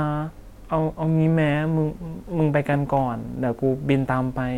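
A faint hiss and roughness rides on the speech throughout, rising on loud, bright sounds: sample clock jitter, a converter clock wobbling by around a microsecond or two.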